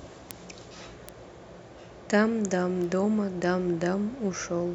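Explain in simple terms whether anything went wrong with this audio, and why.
Three bit error spikes tick at 0.31, 1.09 and 2.84 s in the speech: single corrupted samples that jump briefly, fading from loud to faint.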